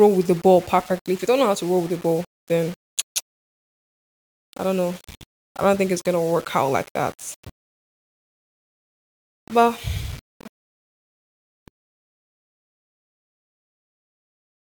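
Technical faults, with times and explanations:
Throughout, low bit depth without dither: the speech has a gritty, grainy edge that follows the talking, roughest on quiet syllables and tails, which crumble or sputter. This is likely rounding to about 6 bits with no dither, leaving distortion roughly 25 dB below the signal.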